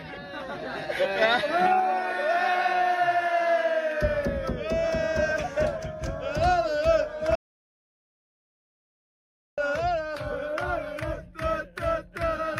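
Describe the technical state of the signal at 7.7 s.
At 7.7 s the signal is in an audio dropout to silence, from 7.35 to 9.58 s. Sound stops dead and leaves silence with no room tone. The likely cause is lost input while recording continued.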